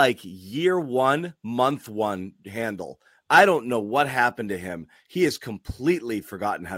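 Nothing stood out as a technical problem on listening to this speech recording.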